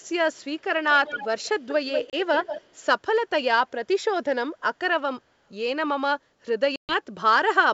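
From 0.35 to 0.62 s, a very faint delayed copy of the speech trails about 0.2 s behind, around 40 dB down. This is echo leak, likely from a loudspeaker whose echo canceller let the sound through. It returns much louder, about 10 dB down and 190 ms late, from 1.06 to 1.74 s and from 1.92 to 2.82 s. At 2.10 s a 30 ms hard-edged hole cuts the sound. This is packet loss on an ADPCM call, with a few packets dropped. The decoder's predictor loses step, so the speech resumes slightly off. A longer 130 ms gap follows from 6.76 to 6.95 s.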